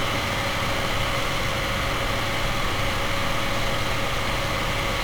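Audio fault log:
Throughout: 1-bit DFPWM compression. Every sample is reduced to a single up-or-down bit driving an adaptive level, so the sound carries thick broadband quantisation noise the whole way through. The damage here is heavy. Everything has a fuzzy, crackly grain, and the top end is buried under hiss, which fits a DFPWM stream at around 48 kbps. There's no clean stretch anywhere to compare against.
0.0 to 0.8 s: buffer tearing. For the first 0.8 s the writer and the reader of the output buffer have slipped against each other. Each period gets a tiny sliver of stale audio from roughly a tenth of a second earlier, spliced in with hard edges on both sides. You hear that as a rattly, robotic buzz at 21.5 Hz, riding on the sound itself, and that repeat rate fits a 2048-sample buffer.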